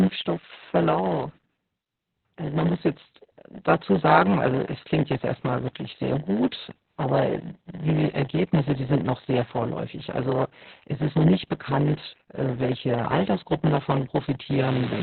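A speech recording with two faults running through its whole length. A block size mismatch (padded) puts a steady 100 Hz buzz under everything: each block arrives shorter than the next stage reads, and the shortfall is filled with silence, so the speech plays at about 0.92 times normal speed while keeping its timbre. On top of that, heavy Opus voice compression at 8 kbps in SILK mode cuts the band to narrowband, with nothing above 4.3 kHz, and coarsely coded excitation leaves the speech muffled, hoarse and slightly robotic.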